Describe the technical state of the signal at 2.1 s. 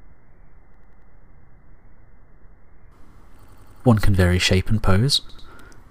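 At 2.1 s the signal shows no audible technical fault, with no dropout, distortion or other disturbance at that moment.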